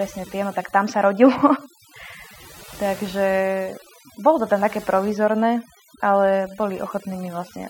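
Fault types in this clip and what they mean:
overdone noise removal: Noise reduction was applied far too aggressively across this entire speech clip. The processor pulls individual frequency bands down hard or mutes them whenever their level sits close to its noise estimate, and softer parts of the speech get caught along with the noise. Between phrases the background drops to near silence dotted with small twinkling artefacts.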